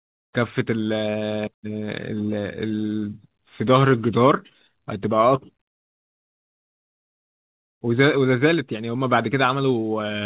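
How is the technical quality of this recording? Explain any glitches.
No glitches can be heard anywhere in this recording.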